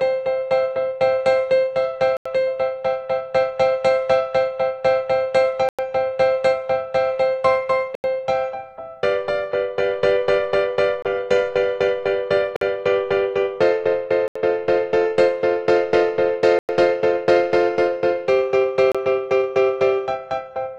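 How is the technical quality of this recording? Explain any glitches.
The recording is marred by eight brief dropouts in which the sound cuts to silence and then resumes: 2.17–2.26 s (86 ms), 5.69–5.79 s (98 ms), 7.95–8.04 s (88 ms), 11.02–11.05 s (25 ms), 12.56–12.61 s (50 ms), 14.28–14.36 s (76 ms), 16.59–16.69 s (99 ms) and 18.92–18.95 s (28 ms). The likely cause is a Bluetooth stall. Radio interference delayed packets, the receiver's buffer emptied, and playback halted until retransmitted data arrived. Each gap is an abrupt hole of 25 to 99 ms, after which the audio carries on.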